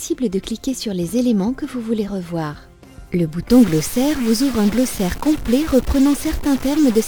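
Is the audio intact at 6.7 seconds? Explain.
No. From 3.51 s to the end, distortion sits on the sound, and quiet stretches fill with noise. This is a stuck bit, likely one data bit held at a fixed value, throwing roughly half the samples off by a constant step. The waveform shows jumps of that fixed step, and the spectrogram shows a broadband wash even in gaps.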